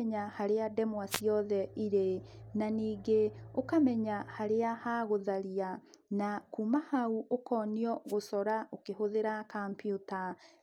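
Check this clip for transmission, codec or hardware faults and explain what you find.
Two wireless microphone noise hits, at 1.10 to 1.21 s, just after "harĩa ndemwa", and at 8.07 to 8.14 s. The FM radio link fades as reflected signals cancel, so receiver noise rises briefly and breaks through as a short swish of static over the speech.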